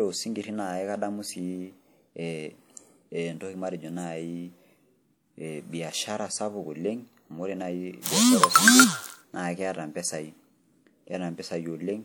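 From 8.01 to 8.05 s, a 32 ms hiss smears in just before an attack. This is pre-echo: codec quantisation noise spread across the block ahead of the onset.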